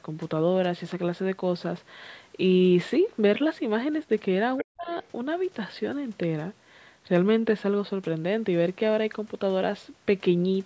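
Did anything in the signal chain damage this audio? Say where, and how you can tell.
Yes, the damage is in the call processing, around the echo canceller. At 4.57 to 4.65 s and again at 4.87 to 5.08 s you hear the other side's voice leaking through, first only about 10 dB under the talker, then much fainter. That's likely loudspeaker echo the canceller didn't fully remove from the mic.

Right between those, from 4.64 to 4.9 s, the talker dips hard, as much as 40 dB at its deepest, for roughly 300 ms. That's speech suppressed in double talk: with both ends active, the canceller likely couldn't tell echo from the talker and ducked everything.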